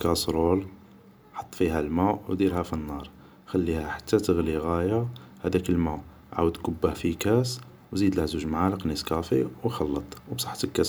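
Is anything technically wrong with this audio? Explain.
No, nothing technically wrong can be heard in this speech clip. No fault stands out anywhere in the recording.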